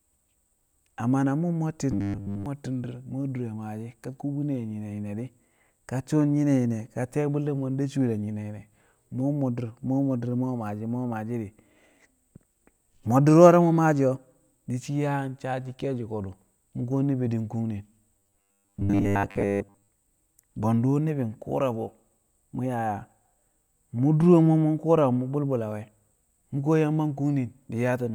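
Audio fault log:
1.92–2.46 s and 18.18–19.90 s, robotic sound from repeated short buffers: new audio likely arrived too seldom, so the playback filled the gaps by looping a roughly 10 ms stretch while most of the real audio was skipped. That loop imposes a fixed 100 Hz buzz rate, turning the speech into a rigid, metallic buzz that only loosely tracks the words.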